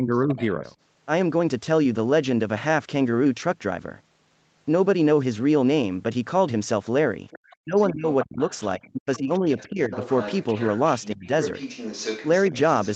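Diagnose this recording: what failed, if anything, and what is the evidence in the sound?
The call processing stage is where this recording fails: the echo canceller could not handle both parties speaking at once. This is speech suppressed in double talk. The talker's level falls away at 0.0–0.62 s (by about 10 dB), 7.6–8.4 s (by about 40 dB, nearly gone), 8.77–9.92 s (by about 25 dB) and 11.14–11.3 s (by about 30 dB). The likely mechanism is the canceller mistaking the near talker for loudspeaker echo and ducking the whole signal. On a waveform the envelope caves in abruptly in those spans. On a spectrogram the harmonic bands fade or break into fragments across the full band, which stops at 8 kHz as the call path normally does.

The same stage lets the other side's voice leak through. A second, fainter voice sits under the talker at 0.13–0.75 s (about 20 dB down), 7.3–7.85 s (about 25 dB down) and 8.22–8.84 s (about 15 dB down), then persists from 9.15 s to the end at only about 10 dB down. 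The likely cause is residual loudspeaker echo the canceller failed to subtract. A spectrogram shows a second set of harmonics with its own pitch contour. A waveform shows a raised floor between the talker's phrases.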